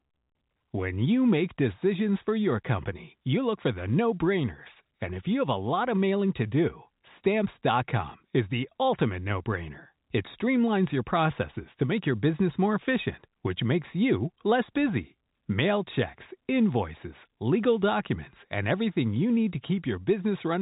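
No technical faults can be heard anywhere in the speech. The G.711 telephone coding is audible as a narrow band with nothing above about 3.8 kHz, and its quantisation noise is faint at most.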